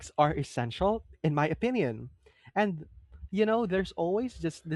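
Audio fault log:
No faults heard anywhere in the speech.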